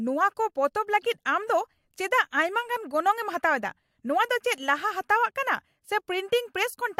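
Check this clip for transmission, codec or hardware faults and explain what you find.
No faults found.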